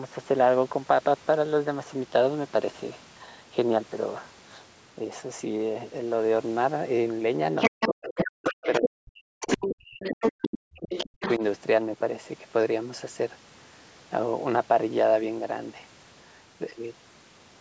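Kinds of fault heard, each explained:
Other side's voice leaking through: 7.57–8.89 s and 9.41–11.31 s, a second voice, first level with the talker, then about 5 dB lower, likely uncancelled loudspeaker echo.
Speech suppressed in double talk: 7.7–9.74 s, 10.11–10.43 s and 11.06–11.42 s, the talker's voice drops by up to roughly 40 dB, likely the canceller ducking both overlapping voices.
Background gated by the echo canceller: 10.71–10.75 s, room sound briefly drops by about 28 dB as the canceller clamps the microphone during loudspeaker playback, then recovers.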